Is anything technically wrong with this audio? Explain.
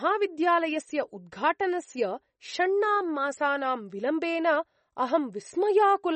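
Yes. Likely MP3 compression throughout: treble stops at 8.4 kHz, and weak frequency lines flicker between frames, giving a plainly watery, swirly sound that fits roughly 32 kbps.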